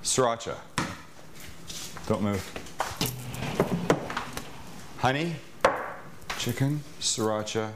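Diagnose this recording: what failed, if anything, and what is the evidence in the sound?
Codec stage: compressed frames skipped at 3.41 s. About 150 ms vanishes, roughly five frames of about 26 ms each. Overlapping frames smear the join into a brief vertical spectrogram smudge.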